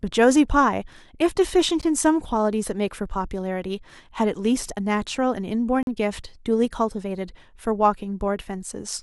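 At 1.81 s the speech drops out for about 15 ms. Both edges are hard. At 5.83 s a longer hole opens and lasts to 5.87 s, about 43 ms. Each is a gap between stream segments. The timestamps of adjacent segments do not meet, and the player fills the space with silence. That suggests a stream cut into 2-second segments. Nothing is removed. The silence is inserted, so the speech resumes exactly where it stopped.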